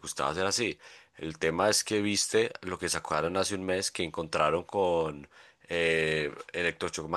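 No technical fault can be heard anywhere in the recording. There is nothing to place on a timeline or trace back to a cause.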